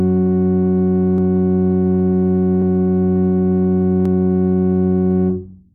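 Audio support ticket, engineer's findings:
Regular click in the music, about four times, every 1.44 s from 1.18 s to 5.49 s. Clock drift buffer slips, likely. Two devices on independent clocks, mismatch around 200 ppm. Buffer drifts until a small block of samples, around 15, is dropped or repeated. Check clock sync between source and output.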